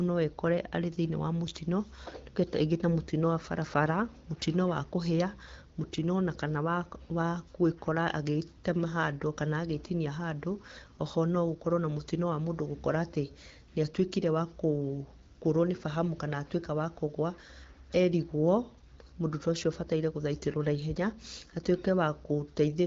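Speech, with no technical fault anywhere in the clip. It comes through the AMR wideband (HD Voice) codec at 12.65 kbit/s, where the speech stays clear with only light coding character and the top of the band stops around 7 kHz.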